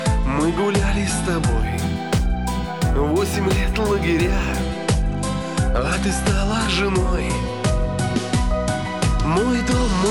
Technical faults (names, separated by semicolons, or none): imaging from linear upsampling